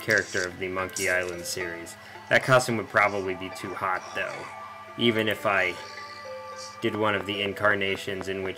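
From 6.95 s to 8.47 s a train of clicks runs over the sound. About seven clicks arrive at a steady 4 per second, each some 15 dB above the audio. They likely come from nearby equipment interference or a faulty connection or power supply.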